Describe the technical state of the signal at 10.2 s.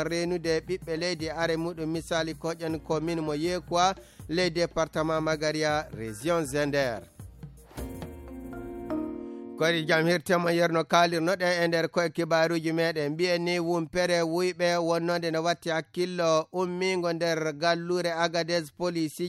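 At 10.2 s the signal is intact, with no audible dropout, distortion, clipping or other technical fault at that moment.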